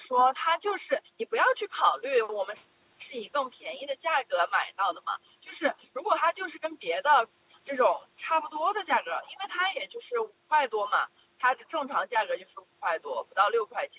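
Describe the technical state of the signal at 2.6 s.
At 2.6 s the speech is intact, with no fault, only the expected band limit of the call path, which leaves nothing above 4 kHz.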